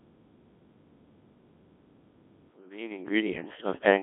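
Speech runs through a Codec 2 vocoder for its whole length, so the voice is rebuilt from sine waves and sounds heavily robotic and buzzy, band-limited to roughly 250 Hz to 3.4 kHz, at a low rate around 1.6 kbit/s. A smooth fade-in from about 2.5 s to 3.89 s is clean.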